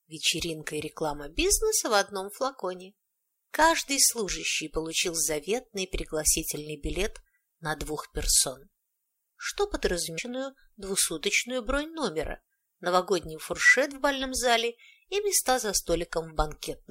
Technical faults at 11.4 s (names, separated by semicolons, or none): none